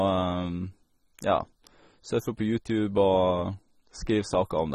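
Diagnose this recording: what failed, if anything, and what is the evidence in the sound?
The speech sounds dull and smeared from start to finish, with a watery, fizzy edge on sibilants and sustained sounds, and nothing at all above about 15.8 kHz. The fault sits at the codec stage and is likely AAC compression at a low bitrate, which fits something around 24 kbps. The AAC-LC encoder, short of bits, discards the top band and quantises the remaining spectrum coarsely, leaving gaps that come across as that fizzy, unsteady texture.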